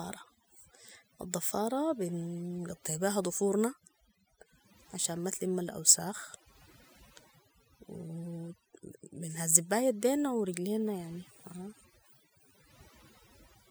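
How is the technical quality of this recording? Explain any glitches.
The recording is marred by overdone noise removal throughout: bands near the noise estimate are gated off, leaving lowered backgrounds with twinkling specks; a spectrogram shows scattered isolated dots between words.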